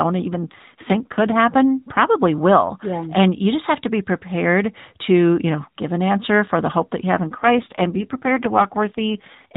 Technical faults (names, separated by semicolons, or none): AMR rate drop